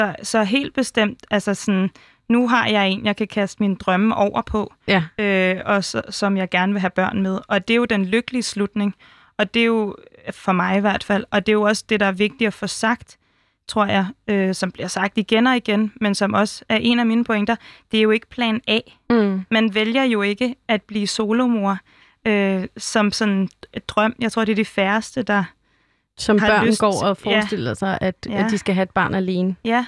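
No technical faults can be heard anywhere in this speech recording. There is nothing to place on a timeline.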